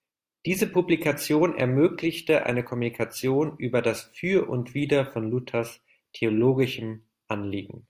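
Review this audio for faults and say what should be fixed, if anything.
Nothing here needs fixing, as the speech comes through with no audible technical fault at any point. There is no repair to make and no preventive step to recommend.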